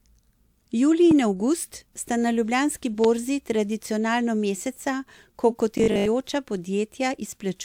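A sharp, single loud pop cuts through the speech at 1.11 to 1.14 s, peaking about 10 dB above the surrounding level. A second loud pop follows at 3.04 to 3.07 s, louder at about 15 dB over the signal. The speech runs on beneath both. Each is likely a brief voltage step or pulse, from a plug, switch, static discharge or driver glitch, that entered the signal path and was shaped by the circuitry downstream into a short thump.

From 5.78 to 6.10 s the speech turns into a rigid, metallic buzz pitched at 50 Hz, still loosely tracking the words. This is robotic sound from repeated short buffers, likely caused by audio arriving too slowly for playback. The software fills the gaps by looping the most recent chunk, and the 50 Hz buzz fits a 20 ms buffer. Roughly half of this stretch is repeated material, with the real audio skipped.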